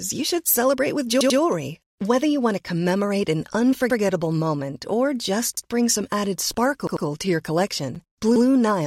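A short stutter, where the same slice of about 93 ms sounds again with a hard join, is heard at 1.21 s (two extra plays), 3.90 s, 5.57 s after "moment or just", 6.87 s after "just bring some added" (two extra plays), and 8.36 s after "to your collection". Each is a repeated buffer: fresh audio arrived late, so the device replayed its last block, which fits a 4096-sample buffer. Nothing seems to be lost afterward.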